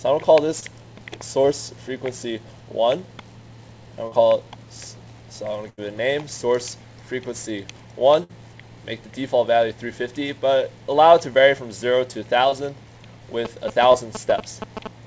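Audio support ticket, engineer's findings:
Short concealed packet loss: brief smears/wobbles at 0.60, 1.42, 4.07, 12.49 and 13.92 s. About 20 ms missing each time, 40 ms at 4.07 s. The jitter buffer/decoder extrapolated the last sound across each hole, then crossfaded back into the real audio.

Burst of packet loss: a held buzz or fading hiss, then a jump ahead. This occurs at 5.70 to 5.79 s (about 80 ms gone) and 8.23 to 8.31 s (about 60 ms gone). Several consecutive packets arrived too late or not at all, and the receiver stretched and attenuated the last sound before resuming.

GSM signalling bursts: galloping dit-dit-dit of short 217 Hz buzzes from 13.45 s to the end, at roughly 5 dB below the audio and overlapping the 13.92 s dropout. A nearby 2G phone sending signalling bursts was rectified by the audio circuitry. This is separate from the call path's band limit, where nothing is heard above 8 kHz, which fits a wideband call codec.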